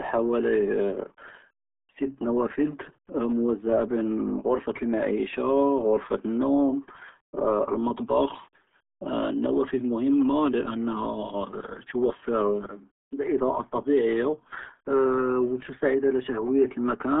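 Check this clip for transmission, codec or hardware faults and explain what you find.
There's one fault, and it runs through the whole clip. It's the RealAudio 14.4 codec: nothing gets through above 3.8 kHz, and the speech comes out muffled and gargly, which fits a heavily strained 8 kbit/s dial-up codec.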